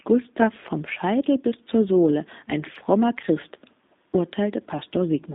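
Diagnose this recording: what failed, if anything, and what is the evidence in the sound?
The speech passed through a G.729 codec at the codec stage. Its rough, slightly synthetic texture fits an 8 kbit/s vocal-tract and pitch model. Content is confined to about 200 Hz to 3.7 kHz throughout, so everything above 4 kHz is missing.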